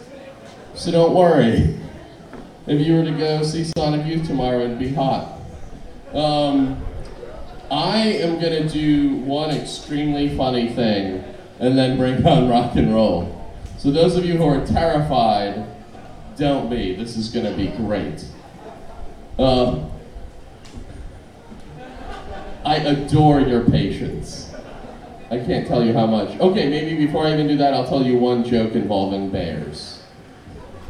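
At 3.73 s the audio drops out for about 37 ms, until 3.76 s. This is a gap at a join of encoded pieces. The material was encoded in separate sections and then joined without trimming, so the encoder's start-up delay and the padding on the last frame were both left at the seam. The result is a short silence with its edges smeared by the codec, after which the sound resumes exactly where it stopped.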